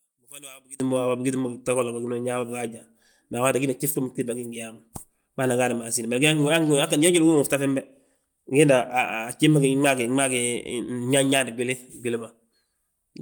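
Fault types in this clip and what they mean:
One channel inverted: one stereo channel likely had its polarity flipped, so summing the pair to mono cancels whatever they share. For the first 0.8 s the speech sits about 24 dB down, leaving only a faint remnant of the difference between channels.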